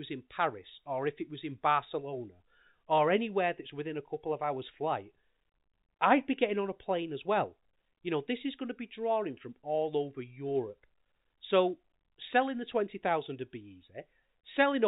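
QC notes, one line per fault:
The speech sits within the narrow telephone band of G.711 coding, with nothing above 4 kHz and only the faint level-following quantisation hiss that format leaves, consistent with a 64 kbps mu-law path.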